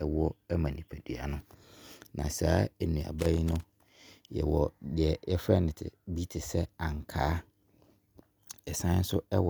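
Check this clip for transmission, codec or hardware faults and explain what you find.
One hardware fault is present. Loose connector crackle from 3.19 to 3.77 s: a worn contact repeatedly breaks and remakes, chopping the speech into an irregular burst of scratchy crackle.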